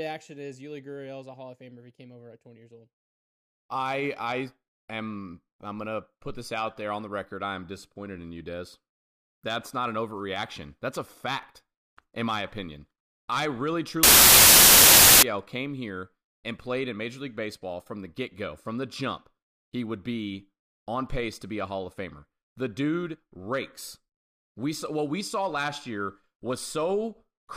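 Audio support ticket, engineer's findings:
Samples built from the wrong bytes, 14.03 to 15.23 s, right after "my opinion I really", clears by "came here and played". Loud harsh broadband noise burst. Decoder mis-assembling sample bytes (offset, swapped order, misalignment), so low bits land as the big part of each value.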